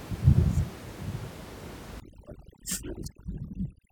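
From 2.0 s to the end, overdone noise removal sets in. A noise reduction stage is working far too aggressively, pulling individual frequency bands down to almost nothing whenever they sit close to its noise estimate, and the quieter parts of the speech are removed along with the room noise, which until then sits about 15 dB below the speech. The background drops and breaks up into twinkling specks.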